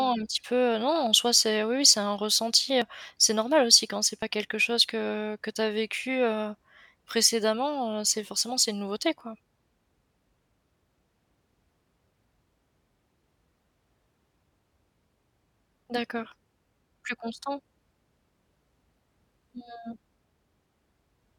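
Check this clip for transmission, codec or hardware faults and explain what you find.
Two faults stand out, both at points where the speech skips forward. At 2.82 s and again at 4.22 s, the likely cause is a dropped buffer (overrun): the recording side fell behind, so incoming samples were overwritten before being read. Roughly 40 ms vanishes each time, heard as an abrupt jump in the speech.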